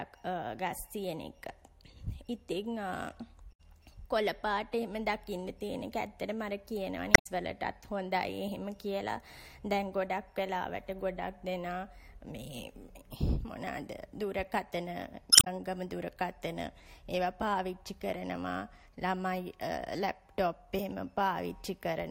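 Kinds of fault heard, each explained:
Damaged data in a compressed stream: corrupt bytes throw the decoder out of sync, so the speech breaks into short chirps, squawks, clicks or holes at 3.49, 7.14 and 15.29 s, each 0.11 to 0.18 s long, showing as abrupt broadband smears on a spectrogram and ragged waveform discontinuities.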